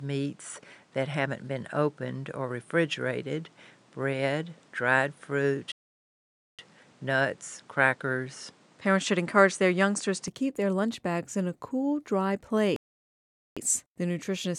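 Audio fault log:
0.00–10.28 s, input switched to a poorer device: the sound is dull and boxy, with a fresh noise floor roughly 35 dB down, then it opens up at 10.28 s with no gap and about the same level. Likely a narrower-band mic in use until then.
5.72–6.59 s and 12.76–13.57 s, playback stall: the output just drops out for 0.87 s and then 0.80 s, then carries on. That's likely the player running dry or its thread getting blocked, so nothing reaches the output until it catches up.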